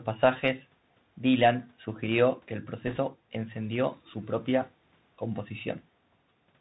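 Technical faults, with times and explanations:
Throughout, Bluetooth CVSD headset codec: the speech has come through the narrowband headset codec at 64 kbps. Each sample is coded as a single up-or-down bit with an adapting step, so nothing above about 4 kHz makes it through and the speech sounds boxed-in. The damage is plainly audible: fast, loud high sounds outrun the step and smear, the s sounds go scratchy, and a fine granular hiss sits under the speech.
2.87 to 2.99 s, bit errors on a Bluetooth voice link: right after "sugirió que el" and before "encendió su propia", there's a short rushing crackle lasting about 0.12 s. Some bits on the headset link got flipped, with the error rate at roughly 2 percent. Every bit in this codec carries the same small weight and mistakes decay quickly, so there are no sharp clicks, just a brief patch of crackly noise over the speech.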